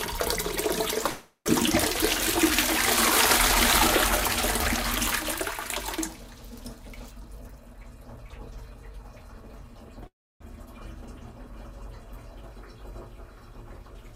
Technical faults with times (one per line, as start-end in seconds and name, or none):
1.09-1.48 call audio freeze
7.22-9.76 jitter buffer speed-up
10.07-10.42 call audio freeze
11.53-14.15 doubled audio track